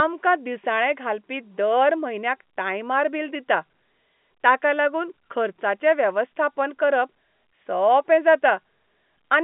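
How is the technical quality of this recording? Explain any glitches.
No glitches are audible; it's ordinary telephone-band speech.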